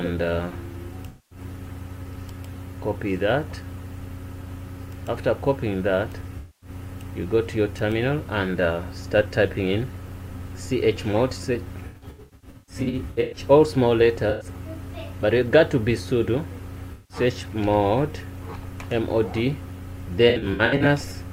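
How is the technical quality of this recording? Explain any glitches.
The recording has repeated AAC frame loss with concealment, at 1.07–1.39, 6.38–6.69, 11.87–13.40, 14.30–14.46, 16.92–17.17 and 20.29–20.86 s. The decoder rebuilds each missing block from the last good spectrum, so the gaps sound smeared, noisy and phasey rather than falling to silence as a plain dropout would. The stretches at 11.87 and 20.29 s flicker through scattered short losses instead of one continuous hole.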